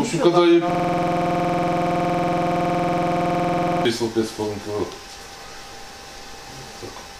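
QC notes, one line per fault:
0.70–3.85 s, system hang loop: a 46.4 ms slice repeats 68 times at 21.5 Hz as a stuttering buzz, fitting a 2048-sample buffer; the waveform shows identical blocks and the spectrogram shows evenly spaced vertical stripes.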